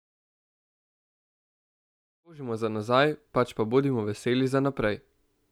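There are no technical faults in this speech clip, and the smooth fade-in ending at about 2.8 s is an ordinary edit rather than a problem.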